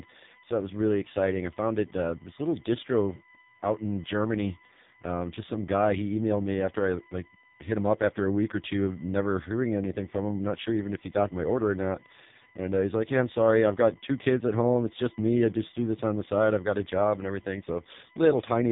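Speech, and it's got two problems running the whole way through. First, there's a steady USB whine: a fixed-pitch tone built on 1 kHz, loudest at its 2 kHz harmonic and sitting about 30 dB below the speech. That's the 1 ms USB frame rate getting into the power or ground. Second, it's been through the AMR narrowband mobile codec and it's heavily damaged. Nothing above 3.8 kHz, and the voice sounds buzzy and synthetic, which fits the lowest AMR-NB mode, around 4.75 kbps, starving the vocal-tract model of pulses.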